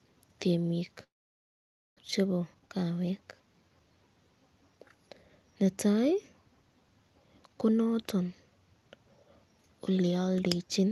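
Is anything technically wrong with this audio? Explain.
Yes, the speech has two faults.

Long network dropout, 1.03 to 2.01 s: audio likely stopped arriving, so the receiver stretched the last sound into a brief fading buzz before about 0.89 s of silence. Speech resumes with roughly 0.6 s missing.

Jitter buffer speed-up, 2.18 to 3.87 s: once delayed audio arrived together, the receiver cut its backlog by repeatedly removing tiny pitch-period pieces, about 0.3 s in all. The speech runs at 119% speed, sounding hurried but unchanged in pitch.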